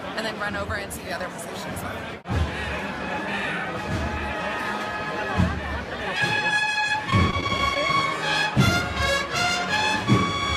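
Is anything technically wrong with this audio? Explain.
Yes. From 6.92 to 7.76 s the audio turns choppy, with brief dropouts. This is repeated packet loss: seven short gaps, none longer than 19 ms, were each patched by stretching the preceding sound, concealing about 80 ms, roughly a tenth of that stretch.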